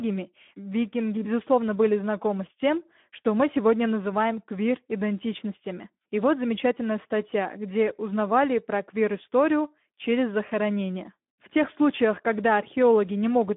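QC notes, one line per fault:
Throughout: Speex codec. A low-rate Speex encode, consistent with about 11 kbps, leaves too few bits for the excitation. The speech sounds plainly hoarse and noisy, confined to a 200 Hz to 3.5 kHz line band, with nothing above 3.8 kHz.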